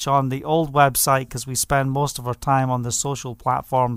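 No technical faults can be heard anywhere in the clip, so there is nothing to describe in time order.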